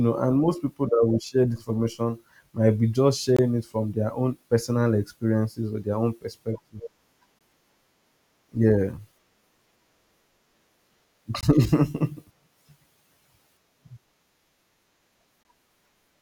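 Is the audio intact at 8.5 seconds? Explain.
Yes, at 8.5 seconds the speech plays through intact, with no dropout, click, distortion or other fault at that moment.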